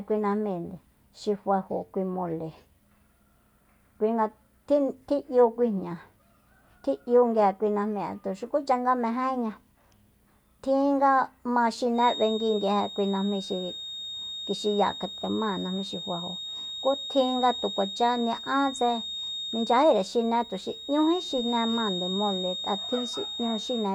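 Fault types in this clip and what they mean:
Feedback whistle: A thin, steady 3.7 kHz tone sits about 10 dB under the speech from 11.92 s onward. Likely a loudspeaker-to-microphone loop near feedback.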